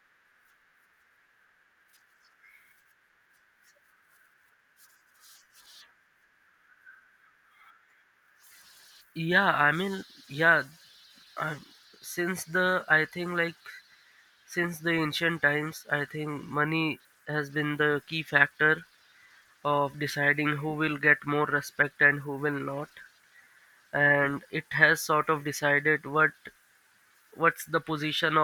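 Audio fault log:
No technical faults can be heard anywhere in the recording.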